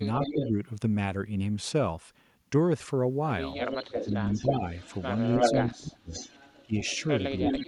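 At 0.21 to 0.51 s an echo leak appears: a copy of the speech returns about 314 ms late, only a few decibels below the direct sound, likely because a far-end loudspeaker's echo canceller let its pickup through. From 0.33 to 0.55 s the speech itself dips by roughly 10 dB in brief patches. This is speech suppressed in double talk, likely the canceller turning everything down when it could not separate the talker from that returning echo.

The echo leak comes back at 3.58 s and runs to 7.66 s, now delayed about 324 ms and roughly as loud as the speech. It is a discrete repeat at a fixed lag, which separates it from room reverberation, where the sound smears and fades away without a distinct copy. Over that stretch the suppression recurs at 3.86 to 4.65 s (around 20 dB down), 5.4 to 6.13 s (deepest, some 35 dB, almost silencing the talker), 6.66 to 6.74 s (about 25 dB), and 7.4 to 7.67 s (about 10 dB). 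These are dips in level rather than clean gaps, and they line up with the overlapping echo. That separates them from packet-loss dropouts, which cut out abruptly regardless of what else is playing.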